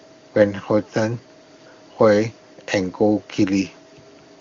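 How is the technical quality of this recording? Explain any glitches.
The technical quality is sound, with no glitches to explain in this speech recording.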